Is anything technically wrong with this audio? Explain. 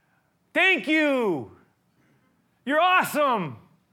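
No, nothing stood out as technically wrong on listening to this speech recording.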